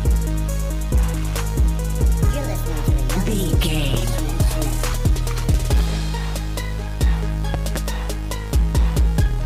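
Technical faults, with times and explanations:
3.94–3.96 s, loud pop: a single sharp pop stands out about 15 dB above the surrounding sound, which continues beneath it without a break. The likely cause is a sudden voltage step or pulse from a plug, switch, static discharge or driver glitch, shaped by the following circuitry into a brief transient.
7.54–7.78 s, loud pop: two pops in quick succession, again peaking about 15 dB above the sound, likely from a similar electrical pulse.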